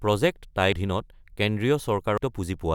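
At 0.72 s the speech jumps forward, losing around 400 ms, and at 2.18 s it does it again, this time losing about a second. Both are compressed frames skipped: whole frames never reached the output, either missing or rejected by the decoder as damaged. The gaps point to roughly five and ten frames of about 85.3 ms each.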